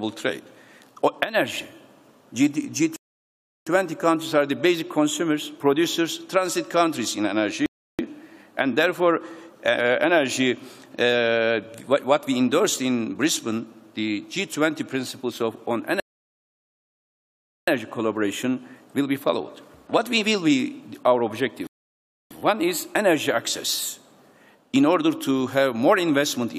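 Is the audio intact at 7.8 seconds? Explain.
No. At 7.8 s playback sits inside a rebuffering stall from 7.66 to 7.99 s. The player ran dry and paused about 0.33 s until more data arrived, then resumed where it stopped. The waveform shows a flat gap, and the spectrogram a blank vertical band.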